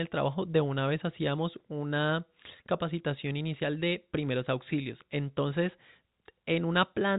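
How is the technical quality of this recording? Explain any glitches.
The technical quality of this recording shows no glitches to explain, only the narrow telephone band of G.711 coding, with nothing above about 3.8 kHz.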